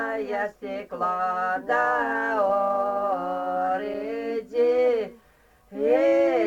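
The sender's audio clock runs around 5 percent faster than the receiver's, a case of clock drift between sender and receiver, so the jitter buffer keeps filling and the receiver has to discard material to keep pace. The result is repeated timing corrections from 0.39 s to 6.28 s: short pieces are cut out at uneven intervals, all in the same direction, pushing the audio along at about 106 percent speed.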